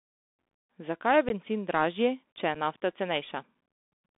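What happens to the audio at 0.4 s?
At 0.4 s the speech carries the Bluetooth CVSD headset codec, present throughout the clip. Each sample is coded as a single up-or-down step, which fits a 64 kbps stream. The band sits between 250 Hz and 3.6 kHz. S sounds turn scratchy, over a granular hiss.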